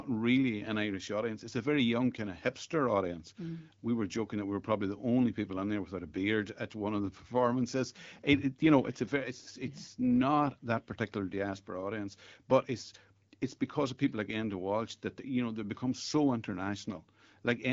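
Nothing stood out on listening to this speech, which comes through the AMR wideband (HD Voice) codec at 12.65 kbit/s.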